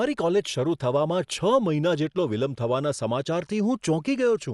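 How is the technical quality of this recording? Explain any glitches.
The technical quality is poor: the speech carries plainly audible codec damage for its whole length. It is dull, with no content above 11.5 kHz, and a rough, fluttering noise clings around tonal parts of the voice. That points to Dolby Digital compression as the likely cause, at a starved bitrate that fits about 64 kbps. Short of bits, the encoder narrowed the band and left many frequency lines without mantissa data, so the decoder filled them with dither noise. That noise-filling gives a grainy, fluttering texture rather than the swirling, metallic chirps of band-starved MP3 or AAC.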